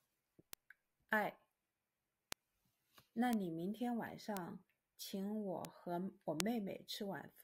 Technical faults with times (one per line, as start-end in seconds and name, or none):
0.53 bit error spike
2.32 bit error spike
3.33 bit error spike
4.37 bit error spike
5.65 bit error spike
6.40 bit error spike